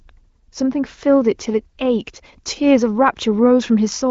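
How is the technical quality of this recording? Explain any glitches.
No glitches can be heard anywhere in this speech recording. It has the sound of AMR wideband (HD Voice) coding at one of its higher rates, with content stopping at about 7.4 kHz and coding damage no more than faint.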